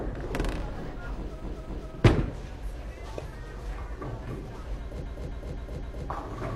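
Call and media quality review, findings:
Repeated frames: compressed block resent or rewritten by the encoder or transport, decoder replays it. Stutter at 1.39–1.90 s (256 ms block heard twice more) and 5.01–6.04 s (four more times); clip lengthened about 1.5 s overall.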